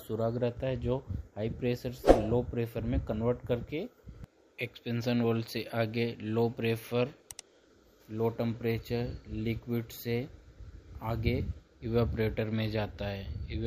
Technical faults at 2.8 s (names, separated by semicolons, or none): none